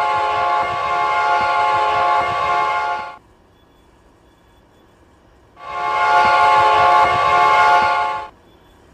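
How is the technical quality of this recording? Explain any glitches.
There is one glitch: from 6.11 to 7.78 s the loud parts turn harsh and crackly. This is hard clipping: the signal overshoots what a stage can pass by about 4 dB, so its peaks are sliced flat, and those squared-off tops spray added harmonics high into the spectrum.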